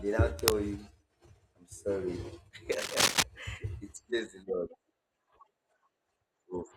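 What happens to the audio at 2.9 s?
Right around there you get a burst of cable scratch noise, running from about 2.72 s to 3.23 s, so roughly half a second. It's a dense, ragged scratching and rustling that sits on top of the speech, coming in somewhat louder than the voice itself. The likely culprit is a worn cable or connector getting moved, so its contact resistance jumps around quickly and spits those uneven noise bursts into the signal.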